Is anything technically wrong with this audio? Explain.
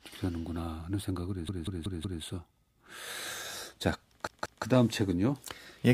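Yes, there's a repeated buffer fault, twice. From 1.49 to 2.23 s one chunk of about 186 ms plays four extra times, and from 4.27 to 4.64 s another chunk plays two extra times. New audio didn't reach the device in time, so it kept replaying the last block, which fits an 8192-sample buffer. The speech stutters with a hard join at each repeat, but practically nothing is skipped afterwards.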